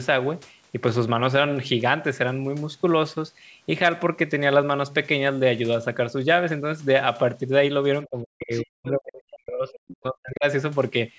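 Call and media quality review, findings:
Speech suppressed in double talk, 8.06 to 10.45 s. Talker's level drops out in chunks, deepest around 40 dB down, roughly two seconds lost in total. Likely the echo canceller hitting double talk, unable to separate near talker from loudspeaker echo, so it ducks everything.

Other side's voice leaking through, two short scraps at 8.53 to 8.65 s and 8.85 to 8.89 s. Short bits of a second voice, sitting well under the talker, something like 25 dB down. Same window as the ducking, so likely residual echo the canceller didn't fully remove from the mic path while it was confused. Band tops out around 8 kHz, as expected for the call mic chain.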